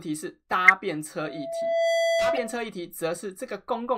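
Speech, marred by a corrupt frame decoded twice. From 0.65 to 0.70 s a few damaged frames play with energy thrown into the wrong frequencies, and at 2.35 to 2.38 s a shorter one sits about 20 dB lower. On a spectrogram each shows as a brief vertical block of energy in the wrong bands, and on the waveform as a sudden spike. Between 1.19 and 2.65 s a loudspeaker feedback squeal rises at 667 Hz. It swells over roughly 0.7 s until it stands about 5 dB above the speech, a single horizontal line thickening across the spectrogram as the waveform's envelope bulges.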